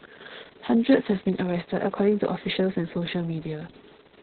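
Opus voice compression runs throughout: nothing above 4.4 kHz survives, and coarse SILK excitation leaves the speech muffled, hoarse and slightly robotic, which fits a very low bitrate.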